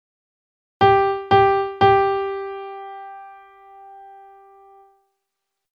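No technical faults are audible.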